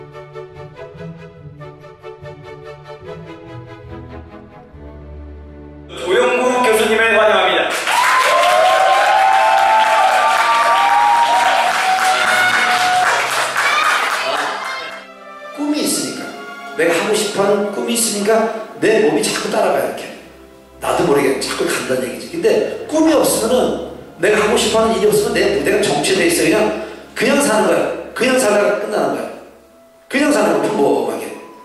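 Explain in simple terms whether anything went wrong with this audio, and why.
Nothing went wrong here: the audio holds together the whole way, with no glitches, dropouts or odd noises to point to.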